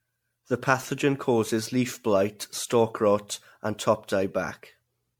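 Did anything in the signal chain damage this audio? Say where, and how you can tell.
Yes, at the codec stage. Across the whole speech clip there's a swirly, hollow smear with blurred consonant attacks, worse than a single 96 kbit/s MP3 pass would give. Nothing above about 19.9 kHz. That's generation loss, likely from roughly ten re-encodes, each requantising on a shifted frame grid.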